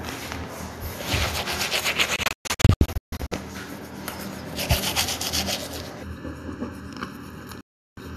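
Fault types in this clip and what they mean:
Digital broadcast dropout: The sound cuts out abruptly through very short fades. From 2.16 to 3.32 s it breaks into several holes, the longest 144 ms, losing 648 ms in all; at 7.61 s it loses 360 ms. The receiver muted on failed frames.
Channel delay (comb filtering): From 6.03 s to the end, the sound turns hollow and phasey, with fixed notches starting near 700 Hz. One channel runs under a millisecond late, so summing to mono cancels shared content at evenly spaced frequencies.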